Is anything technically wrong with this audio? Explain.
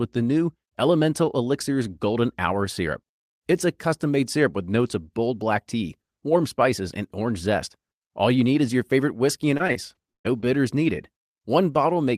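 Yes, the speech has two packet-related faults.

From 9.57 to 10.46 s, repeated packet loss (robotic sound): six gaps, the longest 117 ms, are patched by stretching earlier audio, giving choppy speech with pieces missing. A spectrogram shows smeared, repeated harmonic blocks.

From 10.87 to 10.89 s, a lost packet rebuilt from error correction: a 20 ms low-bitrate copy plays instead, sounding briefly rougher and noisier, visible as a thin grainy spectral slice.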